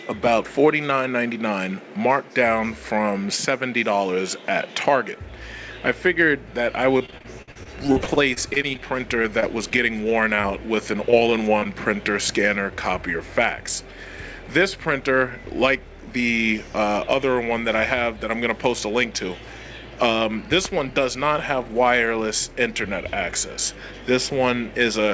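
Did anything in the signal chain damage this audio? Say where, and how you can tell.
Yes. From 6.98 to 8.80 s and again from 9.22 to 11.67 s the audio turns choppy and robotic, with gaps up to 57 ms. This is repeated packet loss on the network, each hole filled by extending the last sound.

From 13.83 to 14.86 s the audio runs 4% fast at the same pitch. This is a jitter buffer speed-up, which trimmed pitch-period slices to shed about 40 ms of backlog.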